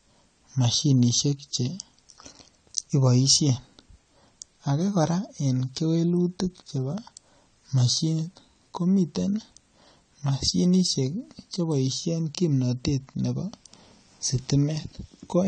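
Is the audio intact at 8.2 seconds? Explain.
No, at 8.2 seconds you're hearing the same AAC compression damage that runs through the whole clip. Nothing comes through above 9 kHz, and the speech sounds dull and smeared with a fizzy edge, which fits a starved bitrate, likely around 32 kbps AAC-LC.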